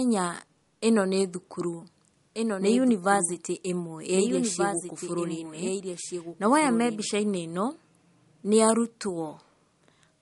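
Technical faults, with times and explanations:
Throughout, MP3 compression: the speech has that watery, swirly quality of a low-bitrate encode, somewhere around 48 kbps, with nothing at all above about 11.2 kHz. The encoder's short of bits, so it chops the treble and lets weak frequency lines flicker in and out frame to frame, which is likely what we're hearing.
2.34 to 7.06 s, doubled audio track: right after "ĩno nĩ thukuru" a second full-band copy of the speech comes in roughly a second and a half behind, a few dB quieter, and it starts and stops abruptly with no room tail. That points to the audio being captured twice, likely through a slower second path.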